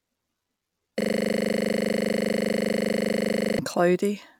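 A speech clip with a system hang loop from 1.01 s to 3.59 s. The driver or host stalled while the audio hardware kept replaying its ring buffer, so one 40 ms slice of speech repeats exactly, about 65 times, giving a rigid 25 Hz rattling buzz in place of the speech. On a waveform, that stretch is a single identical 40 ms shape tiled end to end. A spectrogram shows a frozen pattern with vertical striations every 40 ms and a comb of harmonics spaced 25 Hz apart.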